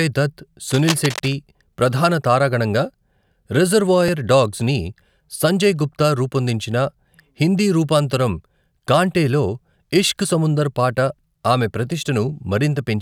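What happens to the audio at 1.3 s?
At 1.3 s, a burst of cable scratch noise is near its end. It runs from 0.70 to 1.34 s, sitting around 10 dB below the speech. Dense, uneven scratching rides over the sound. A worn cable or connector being moved is the likely cause, its contact resistance fluctuating rapidly.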